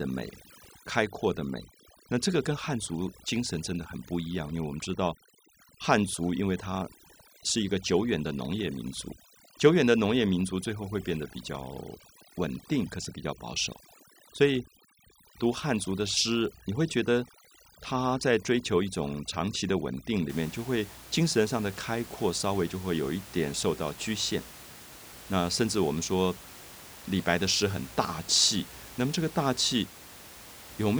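From the start of the clip to about 20.29 s the speech carries overdone noise removal. A noise reducer set far too hard is pulling individual frequency bands down or out whenever they sit close to its noise estimate, so the gaps fall to near silence with twinkling specks and the quieter parts of the voice vanish with the noise. Unlike a low-bitrate codec, the damage tracks the noise floor rather than smearing everything evenly, and after 20.29 s the room noise, about 19 dB below the speech, is audible again.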